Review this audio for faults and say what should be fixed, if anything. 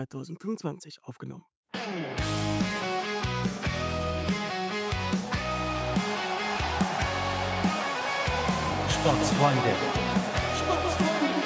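Nothing here needs fixing.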